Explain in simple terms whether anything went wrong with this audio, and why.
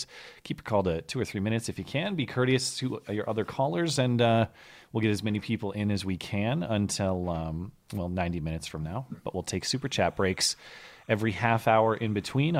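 Something did go wrong near the end. From 9.77 s until the clip finishes, a faint chirping warble sits behind the speech. This is timecode bleed. A timing signal, used to keep recording equipment in step, leaked in from a nearby cable or track. That signal flips rapidly between two pitches, about 1 kHz and 2 kHz, and runs at 30 frames per second. It stays quiet, well under the speech, but you can hear it steadily.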